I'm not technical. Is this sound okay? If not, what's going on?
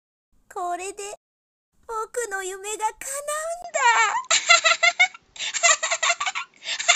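No. At 3.62 seconds the input likely switched to a poorer device: after a brief gap the rest sounds duller, a bit different in level, with faint new background noise.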